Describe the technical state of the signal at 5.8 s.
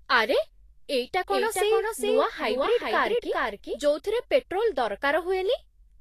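At 5.8 s, as throughout, the speech is hissy and grainy with nothing above 14.2 kHz, likely from low-bitrate Vorbis compression turning coarsely quantised treble into noise.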